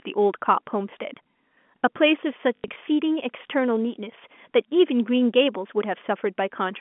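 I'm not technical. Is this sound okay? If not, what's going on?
No. Between 2.56 and 2.76 seconds the speech briefly stutters with a robotic, buzzy quality. This is packet loss with last packet repeated. The audio travels in small chunks, and some went missing, about 120 ms in total over that fifth of a second, the longest gap 80 ms. The receiver filled each gap by replaying the last chunk it had, and those repeats cause the stutter. The narrow telephone sound of the G.711 line itself is normal.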